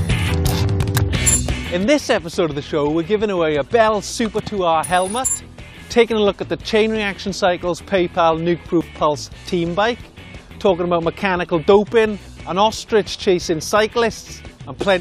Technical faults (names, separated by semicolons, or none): overlap between stream segments